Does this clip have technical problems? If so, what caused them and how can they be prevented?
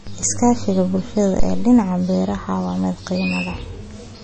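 Yes. Throughout the speech, nothing is heard above about 8.3 kHz, and there is plainly audible watery, swirling damage on sibilants and smeared onsets. This is likely MP3 compression at a low bitrate, consistent with around 32 kbps. Encoding at a higher bitrate, or keeping a lossless copy, prevents it.

A phantom power thump runs from 1.40 to 1.86 s. It is a deep, low-frequency thud with a decay of about 104 ms, caused by a supply voltage step passing through the input's coupling capacitors. Switching phantom power only while the channel is muted prevents it.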